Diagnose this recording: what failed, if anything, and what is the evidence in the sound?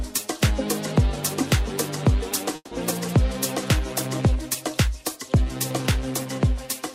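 The failure is at the network stage, most likely a long network dropout. From 2.55 to 2.73 s the last sound is stretched into a fading buzz or hiss for about 160 ms, followed by roughly 30 ms of silence. The audio resumes with about 160 ms missing.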